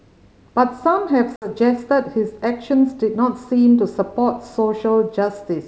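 A speech recording carried over a G.722 wideband call at 64 kbit/s shows packet loss on an ADPCM call between 1.36 and 1.50 s. A few packets, about 60 ms of audio, never arrived and were filled with silence. The decoder's adaptive predictor and step size then no longer matched the sender's, so a hard-edged gap is followed by speech that comes back unsettled and briefly distorted before it recovers.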